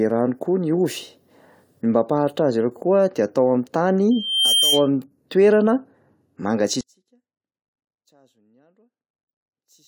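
From 4.11 to 4.88 s a piercing 3.2 kHz tone swells over a little under half a second until it is about as loud as the speech. This is loudspeaker feedback squeal: the microphone picked up its own loudspeaker, and the loop's gain rose above one at that frequency.

From 6.81 s to the end the speech suddenly drops by about 37 dB to a faint trace. The likely cause is one channel inverted, so the material common to both stereo channels cancels when they are summed to mono.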